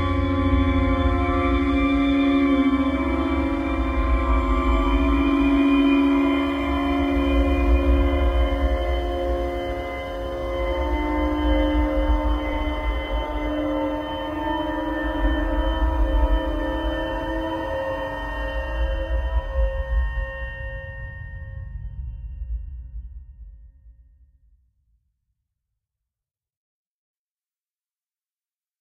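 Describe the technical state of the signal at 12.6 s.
Frames out of order affect 12.51 to 12.57 s: two adjacent blocks, each consistent with a single 23.2 ms frame, were decoded in swapped sequence. That brief stretch plays with its halves exchanged, giving a garbled flutter and no lost time.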